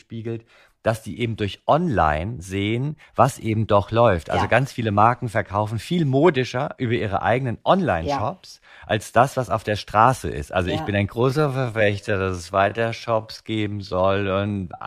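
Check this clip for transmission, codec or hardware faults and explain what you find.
One fault is present: a time-stretched section from 11.12 s to the end at 14.86 s, right after "ja ich bin ein". The speech suddenly drags to roughly 0.65 times its pace while the pitch stays put. This is likely software lengthening that stretch to fill a set duration, repeating short slices of the audio to slow it without lowering the pitch.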